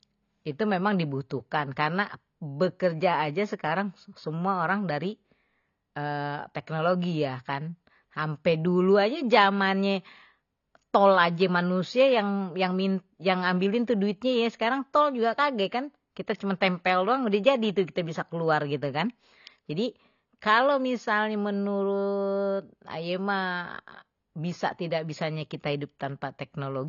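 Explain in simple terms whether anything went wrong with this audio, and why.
The whole clip sounds dull and smeared. Nothing above 6.9 kHz remains, so crisp sounds like s and t lose their edge, and held sounds have a warble. The likely cause is AAC compression squeezing the speech too hard.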